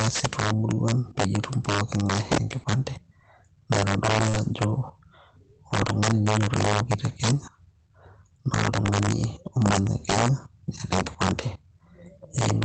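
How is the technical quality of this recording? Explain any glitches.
The recording is marred by two faults: a recurring integer overflow on loud passages and one brief concealed packet loss. It came through a call codec path whose coding noise and upper limit near 8 kHz can be heard.

Integer overflow runs throughout the clip. The speech was driven about 9 dB past full scale, and instead of being limited, each peak above the ceiling wrapped around to the opposite sign. A small fraction of the samples are affected. The peaks give violent cracks, far harsher than the flattened buzz of clipping.

Short concealed packet loss occurs from 4.29 to 4.35 s. About 40 ms of audio failed to arrive, and the receiver covered 38 ms of it by extending the preceding sound before blending back. The result is a brief smear or wobble rather than the silent gap of a true dropout.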